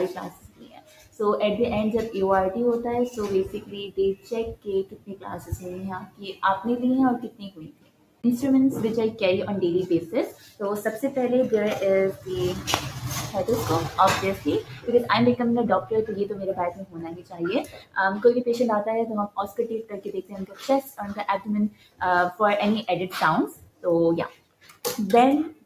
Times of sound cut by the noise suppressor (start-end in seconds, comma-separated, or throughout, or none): 0.29-1.20, 3.56-6.42, 7.23-8.23, 10.30-10.61, 13.90-14.88, 15.81-17.96, 19.28-22.01, 23.48-24.84